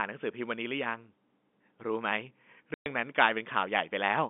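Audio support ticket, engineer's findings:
Dropout, 2.74 to 2.86 s, speech cut to dead silence for 120 ms, hard edges both ends. Packet loss filled with silence: receiver concealment off. Gap length fits six 20 ms packets going missing together. Band sits around 200 Hz to 3.6 kHz as expected for G.711 telephone coding, with any codec grain faint at most. Suggest checking network loss around that moment and enabling PLC.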